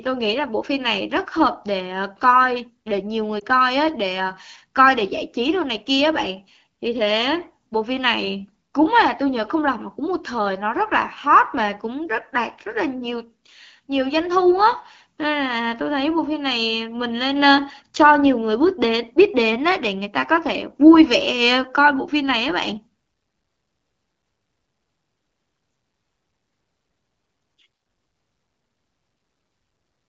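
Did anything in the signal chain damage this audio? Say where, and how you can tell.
Yes. The damage is at the network stage, where radio errors caused lost AMR speech frames. Between 3.40 and 3.43 s the speech briefly dips and warbles. The gap's length fits a single 20 ms frame failing its checksum. The AMR-WB decoder filled the hole by repeating the previous pitch and vocal tract settings at reduced gain. On a spectrogram this shows as a thin vertical band of smeared, repeated harmonics. On the waveform it appears as a short, lower-amplitude stretch before normal speech resumes with the light wideband coding around it.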